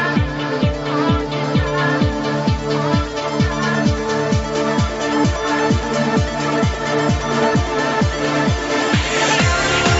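Nothing goes wrong here at all; the sound simply carries the usual character of a call path, with the microphone's high-pass filter trimming the deepest bass and the top end stopping at about 8 kHz, which fits an Opus call running in wideband mode.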